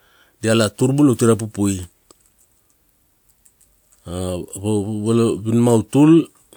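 No audible technical faults here.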